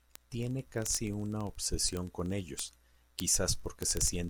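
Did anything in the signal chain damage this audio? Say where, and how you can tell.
Yes, at the digital interface between two devices. From 0.11 s to 4.28 s the speech carries sharp word clock ticks about every 20 ms, around two hundred in all, at a steady rate but uneven in strength. The receiver runs on its own clock, roughly a thousandth off the sender's, so at each slip one sample is dropped or repeated. Buffer underruns would leave audible gaps. These ticks have no gaps, and their strict regularity rules out random clicks.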